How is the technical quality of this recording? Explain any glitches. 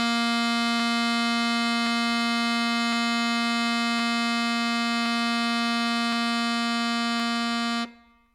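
The music carries a regular click, repeating about every 1.07 s from 0.80 s to 8.26 s. These are likely clock drift buffer slips. Two clocks differing by roughly 150 ppm force a buffer to drop or repeat a few samples each time, roughly seven per slip.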